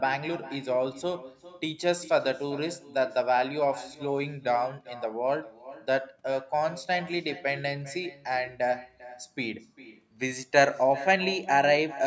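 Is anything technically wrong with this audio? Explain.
Yes. Throughout the speech, every phrase is trailed by a quieter, thinner copy about 17 dB down, arriving roughly 0.4 s later: echo with no canceller, from a loudspeaker feeding the far microphone unremoved.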